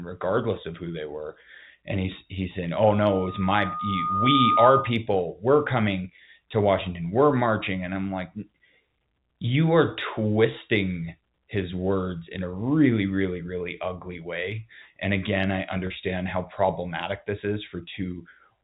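From 2.87 to 4.97 s a steady whistle at 1.2 kHz swells over about a second and a half until it stands roughly 10 dB above the speech, then stops. This is loudspeaker feedback squeal: the microphone was picking up the loudspeaker it fed, and at 1.2 kHz the gain around that loop passed unity, so the tone kept feeding itself and growing. It sits well inside the telephone band that G.711 coding passes, so it comes through at full strength.

At 15.87 to 15.90 s the speech briefly hangs on a slightly held, buzzy sound before carrying on. That is packet loss with pitch repetition. About 30 ms of audio went missing, which fits a single lost packet, and the receiver filled the hole by repeating the last pitch period. The gap is too short for that repetition to fade to silence, so it is heard only as a momentary stuck, reedy texture.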